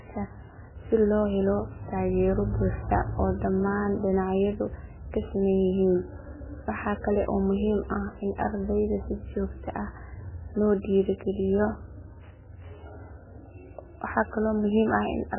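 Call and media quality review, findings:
Wi-Fi interference, whole clip: nearby Wi-Fi radio coupling into the analogue audio circuit, which rectifies its beacon every 102.4 ms. Heard as steady ticking about ten times a second under the speech, roughly 30 dB down.

Codec starved of bits throughout, likely MP3 compression, heavy damage consistent with a bitrate near 8 kbps. Treble cut off, nothing above 3 kHz. Weak frequency lines zeroed and flickering frame to frame. Speech sounds dull, watery and swirly, with smeared attacks.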